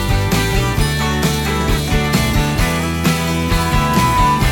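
At 3.12 s a loudspeaker feedback squeal begins and continues to the end of the clip at 4.52 s. A microphone is picking up the loudspeaker it drives, and at 996 Hz the loop gain has gone above unity, so that frequency reinforces itself on every pass. It is heard as a single steady tone that swells over roughly a second, finishing around 5 dB louder than the surrounding sound.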